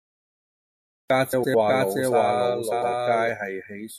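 The clip opens in dead digital silence until 1.10 s, where speech bursts in mid-sound with no attack or fade. This is a cut-off start: the recording or stream began late, so the opening of the sound is missing.

From 1.33 to 1.55 s the speech turns into a brief garbled flutter. These are frames out of order: two adjacent blocks of about 104.5 ms each were swapped during delivery, so that stretch plays with its halves reversed.

At 1.67 s a second copy of the speech starts abruptly and runs until it cuts off at 3.29 s. This doubled audio track trails the original by roughly 0.7 s at about the same level, and it is full-band and dry with no room decay. The likely cause is the same audio being captured again through a slower path and mixed back in.

From 2.71 to 2.92 s the same frames-out-of-order flutter returns. Two neighbouring blocks of about 104.5 ms played in swapped order.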